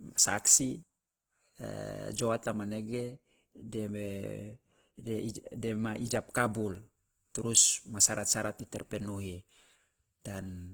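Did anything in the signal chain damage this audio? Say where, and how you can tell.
Yes. The damage sits at the codec stage and runs through the whole speech clip: the vowel harmonics sound grainy, rough and noisy rather than clean. That texture is typical of Opus compression in its CELT music mode, likely starved of bits, with a rate that points to around 16 kbps. On a spectrogram the bandwidth still reaches about 20.1 kHz, but harmonic lines dissolve into speckled, noise-filled bands instead of leaving holes.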